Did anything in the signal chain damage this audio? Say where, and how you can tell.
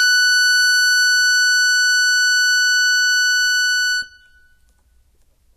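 Yes, at the codec stage. Throughout this music, everything above 14.1 kHz is missing, and the treble sounds hissy and grainy, with roughened tones and softened attacks. That points to Vorbis compression, likely at a bitrate near 20 kbps, where coarsely quantised treble detail turns into noise.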